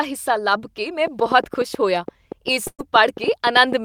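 A train of clicks runs from 1.07 to 3.73 s, starting just after "ਹਿੱਸਾ ਲੱਭ ਕੇ ਮੈਂ". Around twenty similar pops arrive unevenly, about 7.9 per second, peaking roughly 5 dB above the speech. This is likely interference or a struggling interface injecting repeated pulses.

A burst of packet loss falls at 2.67 to 2.81 s. About 120 ms of speech never arrived. The receiver filled 112 ms by extending the last sound while fading it, with about 50 ms of that near silence, and playback then resumes further on.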